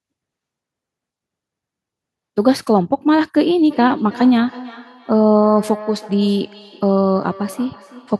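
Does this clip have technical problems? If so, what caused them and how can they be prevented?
Yes. Feedback echo between two devices runs from 3.7 s to the end of the clip. Each word returns about a third of a second later, at up to about 17 dB below the speech. The delay is fixed, so the echo is following a loop: a second device on the same call plays this sound aloud, and the first microphone picks it up again. Each device's echo canceller removes only what that device itself plays, so this returning copy gets through. To prevent it, keep only one device joined to the call in each room, or mute the speaker and microphone on the extra device.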